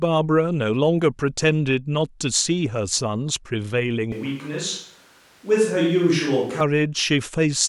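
A speech recording that abruptly turns roomy and hollow from 4.12 s to 6.61 s, with thinner bass, then snaps back. It is most likely a switch to a distant microphone. The level barely changes, but faint room noise comes in, roughly 35 dB below the speech. A low-cut filter would only thin the sound. What marks this as a different pickup is that roominess, bass loss and room noise all change together at hard boundaries.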